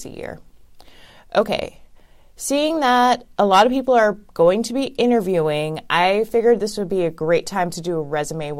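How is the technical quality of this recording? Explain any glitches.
Nothing in this recording stands out as a glitch, since the speech stays steady and unbroken throughout, so there's really nothing to explain.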